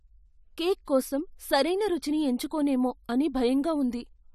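From 0.85 to 0.88 s, just before "కోసం సరైన రుచిని ఎంచుకోనేమో", there is pre-echo: a short hiss of about 23 ms precedes a sharp onset. The transform codec spread quantisation noise sized for the loud attack across the whole block, so it leaks into the quiet gap and smears the attack.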